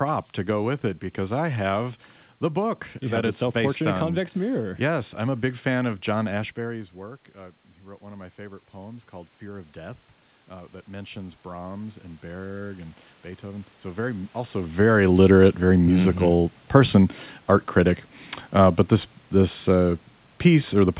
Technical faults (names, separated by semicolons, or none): automatic gain rising